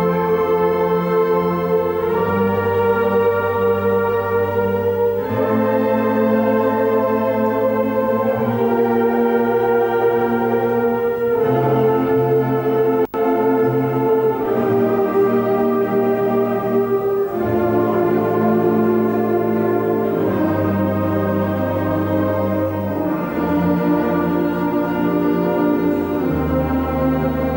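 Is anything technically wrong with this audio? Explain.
Yes. Video or display buzz runs throughout: a 50 Hz field-rate buzz with hash above it, plus a 15.6 kHz line tone that mains hum would lack.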